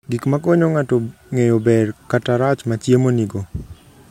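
Nothing technical stands out in this short bit of speech; it comes through without any faults that can be heard.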